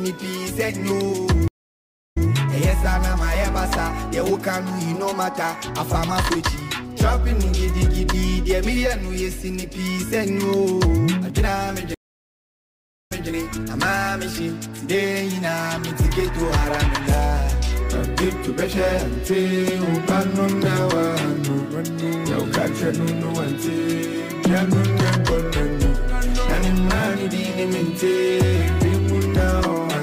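At 1.48 s the audio drops out for 0.67 s and comes back at 2.28 s, briefly repeating the last 0.13 s heard before the gap. At 11.94 s a longer 1.15 s silence follows, and at 13.30 s playback picks up 0.21 s earlier than where it stopped. Both are stream reconnects: the connection failed, the player reconnected, and the server resent a short burst into a freshly started decoder, whose first frames come in muted or faded up.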